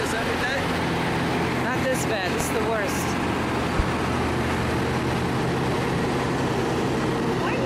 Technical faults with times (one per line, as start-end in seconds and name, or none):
2.40-2.59 loud pop
3.79-3.82 loud pop